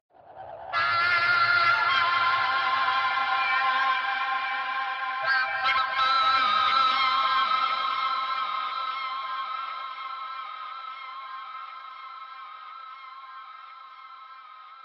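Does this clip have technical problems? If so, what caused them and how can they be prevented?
Yes. From 0.0 to 6.0 s the audio lacks treble and shows heavier codec artefacts, then improves abruptly without a gap: an adaptive stream starting at a low bitrate, roughly 32 kbit/s Opus stepping to 64. Starting at a higher rendition prevents it.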